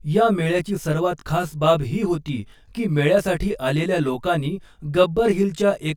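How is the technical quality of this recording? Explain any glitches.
The recording has one fault, present throughout. Channel delay (comb filtering): one channel lags about 20 ms before mono summing, cutting evenly spaced notches from near 30 Hz upward. The speech sounds rough or slightly doubled, and a spectrogram shows fixed horizontal stripes.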